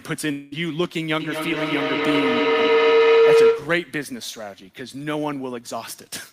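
From 0.31 to 0.54 s the speech gives way to a buzzy continuation of the last sound that fades without ever reaching silence. This is likely a long network dropout: about 200 ms of audio never arrived and was patched over, then the speech resumes without the lost part.

At 0.84 s a single sharp click cuts through, and another at 3.01 s. Both are likely dropped samples: only a couple of samples go missing, so the waveform jumps abruptly, too briefly to erase any sound.

From 1.20 to 3.97 s a feedback howl builds to about 10 dB above the speech, centred around 500 Hz and pulsing roughly every 200 ms. A microphone-to-loudspeaker loop was regenerating the sound on each pass until it was broken.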